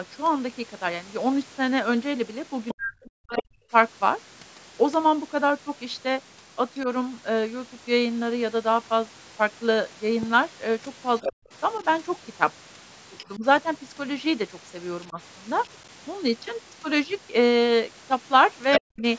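From 2.68 to 3.41 s, the echo canceller likely failed to remove the loudspeaker signal from the microphone, so the other side's voice leaking through is heard as a second voice about 10 dB under the talker. The same happens from 11.22 to 13.24 s and briefly from 18.71 to 18.80 s, where the leak is stronger at about 5 dB below the speech.

Overlapping these leaks, the canceller likely mistook double talk for echo and turned everything down. This speech suppressed in double talk shows up from 2.73 to 3.59 s, 11.28 to 15.18 s and 18.79 to 19.03 s. The talker's voice is pushed down, sinking by as much as about 40 dB.

Between these, at 10.23 to 10.25 s, a sudden voltage step, likely from a plug, switch or driver glitch, adds one loud pop about 5 dB above the speech, and the speech continues underneath.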